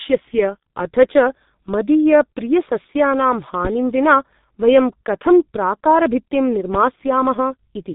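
Muffled, hoarse speech runs through the whole recording, with smeared consonants and no content above about 3.8 kHz. This is heavy G.723.1 codec damage. Its 30 ms frames and slowly updated voice model blur fast articulation, and the sound fits the codec's 6.3 kbit/s rate. From 3.65 to 3.69 s a single loud pop, peaking about 10 dB above the speech, cuts sharply across the audio while the speech continues beneath it. It is likely caused by a voltage spike from a plug, switch, static or driver glitch.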